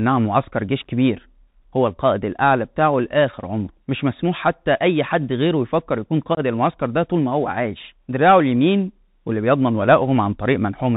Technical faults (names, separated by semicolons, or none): Bluetooth CVSD headset codec; unconcealed Bluetooth headset packet loss